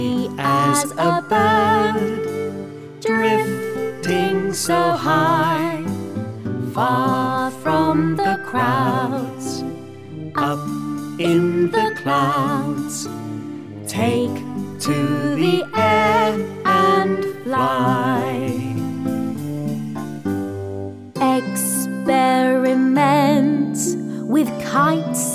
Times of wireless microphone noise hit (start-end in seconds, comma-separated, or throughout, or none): none